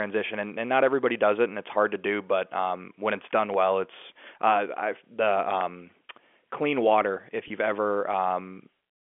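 Just after "not everybody does it", from 1.47 s to 7.68 s, a click recurs every 2.08 s, four times in all. These are clock drift buffer slips, likely from two devices whose clocks differ by a couple of hundred parts per million, so a small block of samples is periodically dropped or repeated.

From 7.48 s to 7.50 s, 20 ms of audio is missing, consistent with one lost packet. This is packet loss with pitch repetition: the receiver repeats the last pitch period to fill the gap, heard as a brief held, buzzy tone within the telephone-band G.711 audio.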